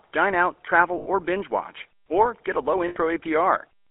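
Throughout, the speech carries the GSM full-rate codec's buzzy, gravelly roughness inside a 300 Hz to 3.4 kHz band, consistent with 13 kbps pulse-excited coding rather than plain band-limiting. After "dine out" (0.98 to 1.08 s) and after "or get a low" (2.88 to 2.97 s), lost GSM frames hold the last sound as a metallic ring for about 80 ms, which fits four concealed frames rather than a silent dropout.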